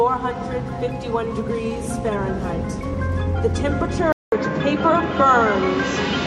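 Input switched to a poorer device, likely, at 4.12 s: a 200 ms gap, then dull sound, nothing above 7.6 kHz, faint new background noise.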